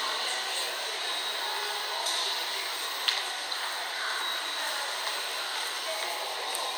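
Nothing goes wrong anywhere in this bit of sound, so there's no fault to point to at any moment.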